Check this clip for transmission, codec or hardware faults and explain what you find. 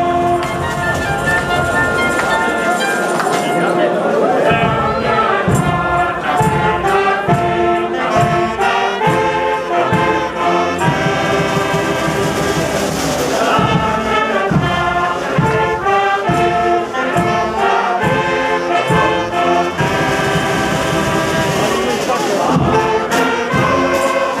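Nothing here points to a transmission, codec or hardware problem, so there's no fault to report for this clip.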